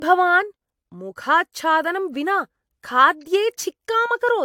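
Throughout the speech, the sound is swirly, smeared and hollow, with blurred attacks, likely generation loss from around seven rounds of lossy encoding, consistent with AAC-style coding. A spectrogram shows nothing above 19.2 kHz and ragged holes through the upper bands; waveform transients look softened.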